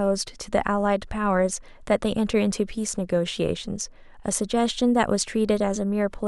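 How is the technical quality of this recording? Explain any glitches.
No glitches can be heard anywhere in the recording. The speech runs continuously, with nothing that calls for explanation.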